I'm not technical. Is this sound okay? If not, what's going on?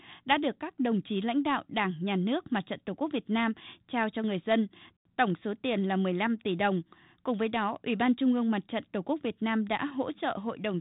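Yes, it's fine: nothing is wrong here, and the slightly narrow, telephone-like quality is simply how speech normally sounds when it's carried by the kind of G.726 coding a cordless home phone uses.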